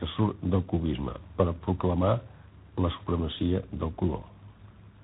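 A speech clip with tandem speech coding throughout: the voice sounds rough, muffled and warbly, as if several coders had each re-encoded the last one's output, which fits a chain ending in G.726. A spectrogram shows nothing above 3.8 kHz and smeared harmonics.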